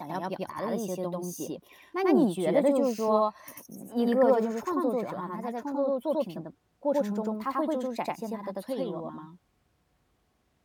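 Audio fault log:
Throughout: channel delay (doubling). Every syllable of the speech arrives twice, about 93 ms apart, at equal level. One channel runs late, which fits a 4096-sample buffer. Summed to mono, the late copy stands apart as a slap echo.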